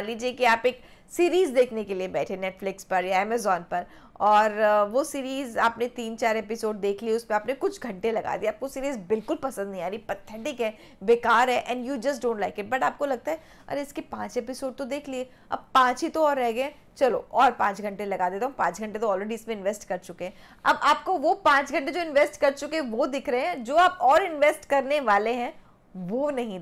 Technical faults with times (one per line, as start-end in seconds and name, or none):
none